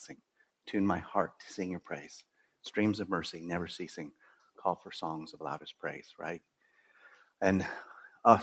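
A speech-tuned noise suppressor applied to music or sounds runs throughout, treating steady material as noise and pulling its level up and down by about 5 dB, so the sound pumps. Sound cut by the noise suppressor follows at 0.14–0.67 s, 2.23–2.64 s, 4.15–4.6 s, 6.4–7.41 s and 8.09–8.24 s, dipping by about 17–18 dB (about 11 dB in the last) as held tones sink. All of this sits in audio that tops out near 8 kHz.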